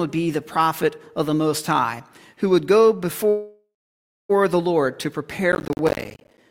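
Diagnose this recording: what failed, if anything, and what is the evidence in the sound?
At 3.29 s the sound stops moving and is stretched into a fading tail. The final 0.6 s before 4.31 s is silent, then the audio resumes exactly where it left off with nothing skipped. That is a call audio freeze at the network and jitter-buffer stage. The likely cause is packets stalling in transit, which drained the buffer so the receiver had to fill about 1 s on its own. Everything afterwards now arrives about 1 s later.

From 5.52 to 6.38 s a gritty burst of crackle tears through the sound and then stops. Close listening shows a rapid run of tiny hard-edged dropouts to silence, around forty of them, spaced in a way that fits audio buffers of about 10 ms. This is processor overload crackle at the driver and buffer stage. The processor kept missing its buffer deadlines back to back, and every buffer it failed to deliver in time went out as a short gap of silence.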